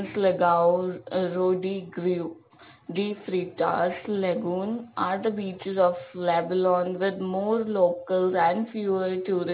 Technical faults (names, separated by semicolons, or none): aliasing